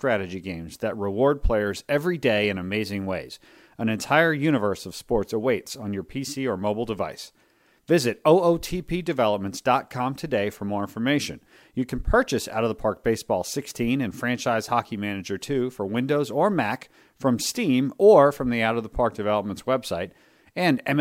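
No dropouts, distortion or timing problems turn up anywhere in the recording.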